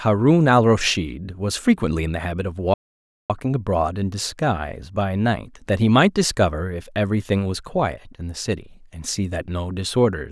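A speech clip with a playback stall from 2.74 to 3.30 s: the sound cuts to silence for about 0.56 s, likely from the player running out of buffered data, then resumes. It shows as a flat gap on the waveform and a blank vertical band on the spectrogram.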